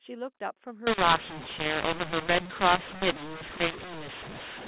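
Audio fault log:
0.87 to 4.68 s, mu-law and A-law mixed up: the mu-law telephone speech gets read back as A-law, so levels scramble, the sound turns harsh and gritty, and pauses fill with noise.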